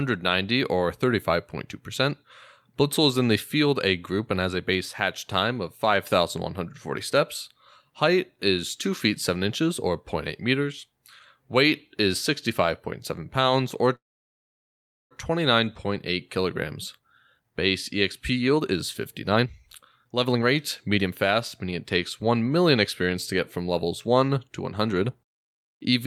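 At 13.95 s a call audio freeze begins. The speech stops and goes silent for about 1.1 s, then resumes at 15.13 s with nothing lost. Held-up packets likely emptied the jitter buffer.

Jitter buffer speed-up follows, as the receiver trims excess delay by cutting short pitch-period pieces. Speech runs faster at unchanged pitch: 129% at 16.77–17.55 s, 137% at 18.34–18.77 s, 121% at 19.31–21.72 s, and 108% at 22.22–25.10 s. It sounds hurried, most strongly in the first two stretches.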